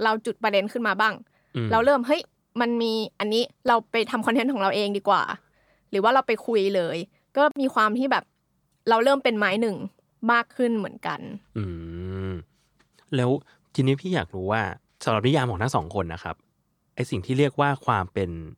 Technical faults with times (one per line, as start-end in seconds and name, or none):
3.68 dropped samples
7.51-7.56 gap at a join of encoded pieces
15.42 dropped samples
17.26 dropped samples